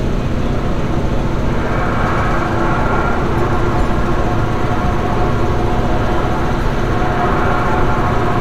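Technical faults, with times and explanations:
No technical faults can be heard in this clip.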